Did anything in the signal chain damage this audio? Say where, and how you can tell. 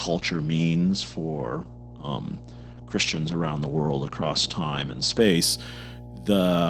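Yes. A mains hum sits under the whole clip: a steady 60 Hz tone, fairly strong at about 15 dB below the speech. This points to the analogue wiring, where a ground loop or nearby transformer couples the power line into the signal before conversion.

The second problem is an adaptive stream starting at a low bitrate, in the network delivery. From 0 to 5.2 s the treble is missing, with nothing above 8.5 kHz, and codec artefacts are heavier. Quality then jumps with no gap, which fits the player switching from roughly 12 kbit/s Opus to roughly 64 kbit/s once it had measured the connection.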